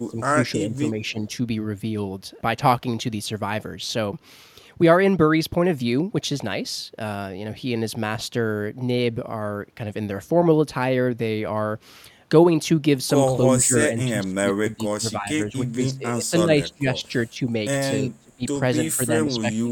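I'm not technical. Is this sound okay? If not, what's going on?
No. In several places the speech gets turned down, which is the pattern of speech suppressed in double talk. The likely cause is that both ends of a call were talking at once, and the echo-cancelling system couldn't tell this talker from the echo of the other person, so it turned both down. The voice dips or drops out in pieces at 0.0–0.36, 0.55–1.24, 13.44–17.08 (the longest stretch), 17.3, 18.01–18.43 and 18.91 to the end.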